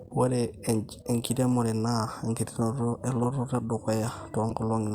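Speech with corrupt frame decoded faults: brief glitches at 1.53 s, 3.23–3.27 s and 4.50–4.53 s, where damaged compressed frames were played anyway. On a spectrogram, each shows as a short smear of misplaced energy, peaking around −30 to −20 dBFS, spanning one to a few frames.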